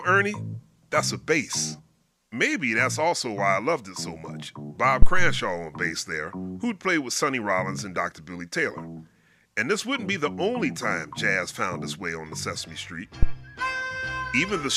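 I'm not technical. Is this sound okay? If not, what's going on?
No. There are two deep thumps, at 5.02 s and 13.23 s. This is a phantom power thump: a microphone's power supply was switched while recording, jolting the input.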